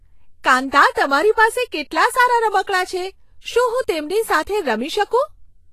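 From start to finish the speech has no content above about 14.2 kHz, and the treble that remains sounds hissy and grainy, with consonant onsets smeared and a rough edge on sustained tones. This is plainly audible Vorbis compression, likely at a low bitrate near 31 kbps: the upper band is coded so coarsely that its detail turns into noise-like texture of similar energy. Unlike a plain low-pass filter, the band below the cut-off is also roughened.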